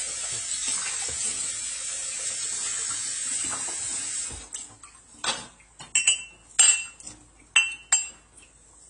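From start to finish, the audio has nothing above 10 kHz and a dull, smeared texture, with a watery warble in sustained sounds and fizz around sibilants. This is likely AAC compression: the encoder quantised its frequency lines too coarsely and dropped or patched weak bands, a level of damage that fits a low bitrate around 24 kbps. A plain low-pass filter would only dull the top, without the shifting, fizzy artefacts heard here.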